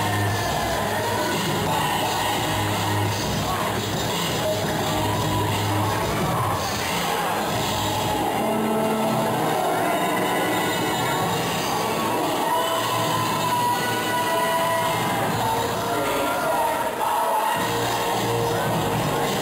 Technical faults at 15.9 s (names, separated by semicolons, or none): imaging from sample-and-hold upsampling